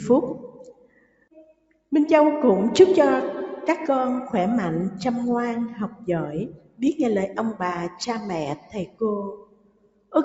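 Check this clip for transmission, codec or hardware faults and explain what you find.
A speech-tuned noise suppressor is left running on this non-speech sound. Its gain swings by about 20 dB, and it cuts several passages hard.

The noise suppressor applied to music or sounds acts throughout. It mistakes sustained tones and ambience for noise, so the sound pumps and thins while attacks pass.

Sound cut by the noise suppressor occurs at 0.43–1.92 s (about 19 dB), 5.89–6.08 s (about 10 dB), 6.48–6.82 s (about 19 dB), 7.28–7.62 s (about 14 dB), 7.89–8.04 s (about 10 dB), 8.56–9.02 s (about 18 dB) and 9.28–10.14 s (about 19 dB). In each span, held or decaying sound sinks in level or its decay is cut short.

Nothing reaches above 8 kHz, which fits the call codec's bandwidth.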